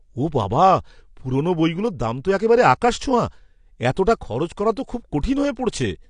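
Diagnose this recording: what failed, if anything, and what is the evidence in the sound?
The codec stage is the likely point of failure: the speech appears to have passed through AAC compression with the AAC-LC coder at a low bitrate, which fits something around 32 kbps. Throughout the clip there is nothing above 9.8 kHz, because the encoder dropped its cut-off to spend scarce bits on the lower bands. The damage is plainly audible. The coder quantises each block of frequency lines coarsely against its hearing model, so the remaining spectrum loses detail, and the speech comes out dull and smeared.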